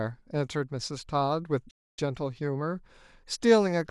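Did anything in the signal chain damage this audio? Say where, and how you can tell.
Yes, a playback stall: the speech goes silent from 1.70 to 1.99 s, about 270 ms, most likely the player starving for data, a single clean gap rather than repeated brief dropouts.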